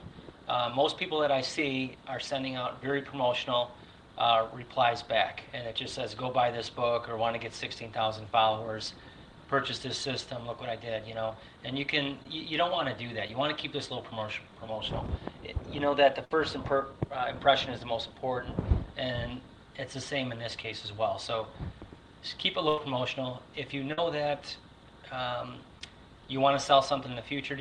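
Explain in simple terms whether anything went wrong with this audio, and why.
Some audio packets were lost on the way through the call. There were four cases of short concealed packet loss, at 12.23–12.26, 13.28–13.30, 20.62–20.65 and 25.79–25.81 s. Each time, about 10 ms never arrived, and the receiver covered the hole by stretching the sound just before it. You hear a tiny smear or wobble.

There were also three bursts of packet loss: about 60 ms missing at 16.25–16.31 s, 80 ms at 22.69–22.78 s and 50 ms at 23.93–23.98 s. The receiver held the last sound and let it fade, so there is a brief buzz or hiss. Then the audio jumps ahead, and that stretch is gone.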